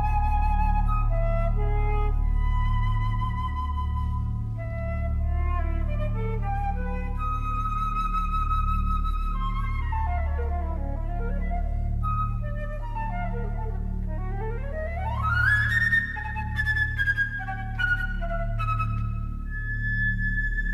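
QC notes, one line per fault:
No faults found on review; nothing to log.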